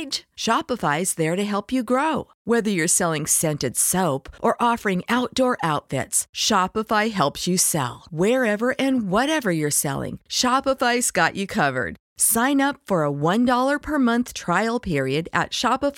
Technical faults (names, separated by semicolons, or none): none